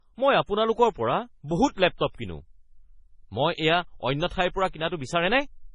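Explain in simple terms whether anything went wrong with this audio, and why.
The speech sounds muffled throughout, with nothing above 10 kHz. This is likely low-bitrate audio saved at a high bitrate; the lost detail never came back.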